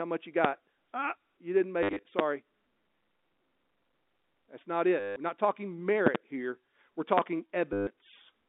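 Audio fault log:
0.45 s, 2.19 s, 6.07–6.18 s, 7.18 s, loud pops: sharp thumps about 20–25 dB over the speech, a double one at 6.07 s after "not talking", likely from voltage spikes such as a switch or static.
1.83–2.03 s, 5.00–5.16 s, 7.73–7.87 s, packet loss with last packet repeated: brief robotic stutters, the first right after "you didn't", as scraps repeat, which fits 10 ms packets buzzing near 100 Hz.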